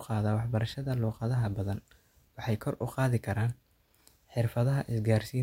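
No technical faults can be heard anywhere in the speech recording. Nothing in the signal calls for a timestamp or further comment.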